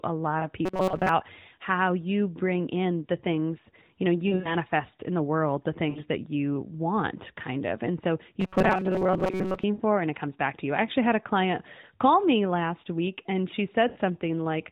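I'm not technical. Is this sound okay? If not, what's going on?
No. There are lost AMR speech frames at 0.40, 4.28–4.56, 5.90–6.01, 9.74–9.82 and 13.88–13.98 seconds. Radio errors wiped out short chunks, and the phone filled each gap with a brief dip, warble or smeared, fading sound.

There is also robotic sound from repeated short buffers at 0.65–1.09 and 8.40–9.64 seconds: a rigid metallic buzz. It is likely caused by tiny slices being looped while most of the real audio is skipped.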